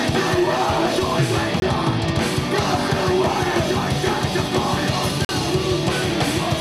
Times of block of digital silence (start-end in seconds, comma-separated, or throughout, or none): 1.60-1.62, 5.25-5.29